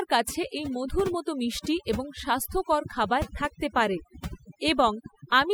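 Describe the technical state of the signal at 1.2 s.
At 1.2 s you're hearing overdone noise removal, and it runs through the whole clip. The denoiser was pushed too hard, so individual frequency bands near its noise estimate get pulled right down, taking the softer bits of speech along. The gaps go almost dead with little twinkling specks.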